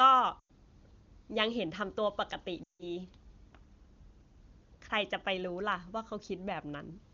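Lost AMR speech frames at 0.39–0.51 s and 2.63–2.87 s: corrupted frames were concealed from the last good parameters with falling gain, so the wideband speech briefly smears and fades before recovering.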